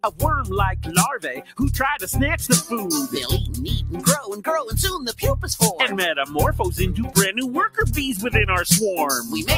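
A speech-tuned noise suppressor left on throughout is treating steady parts of this sound as noise, so its gain keeps swinging by roughly 10 dB. Sustained tones and decaying tails sink while attacks pass, giving a pumping, thinned-out texture. The suppressor also turns down specific sounds more than the rest. From 0.01 to 0.22 s it pulls one down by up to about 16 dB, and from 1.18 to 1.6 s another drops by up to about 15 dB. In both places the sound sinks in level.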